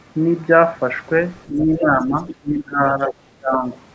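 Speech recorded through call processing, with the talker's level repeatedly pulled down: speech suppressed in double talk at 1.47–2.15 s, 2.41–2.81 s, 2.98–3.13 s and 3.39–3.65 s, dipping by roughly 10, 20, 5 and 25 dB. This is likely an echo canceller attenuating everything while both sides spoke. The other side's voice leaking through appears as brief fragments at 2.27–2.34 s and 3.04–3.13 s, about 15 dB and 10 dB below the speech, consistent with residual loudspeaker echo the canceller failed to remove.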